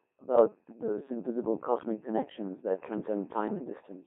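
Robotic, buzzy speech confined to about 250 Hz to 3.5 kHz runs through the whole clip. This is the Codec 2 vocoder, heavily damaging the sound, which fits a rate near 2.4 kbit/s. Only pitch, voicing, energy and a spectral envelope are sent, and the decoder rebuilds the speech from sine waves instead of preserving the waveform.

From 0.34 to 0.48 s the synthetic voice lurches in pitch, level and tone colour, breaking into warbling gibberish. These are bit errors on digital voice radio: corrupted bits, at a rate of roughly 5 percent, scramble the parameters of several frames, consistent with about four.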